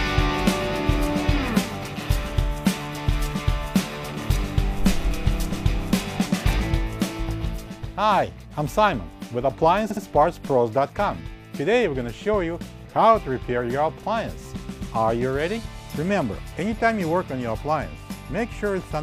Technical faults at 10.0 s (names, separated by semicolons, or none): repeated frames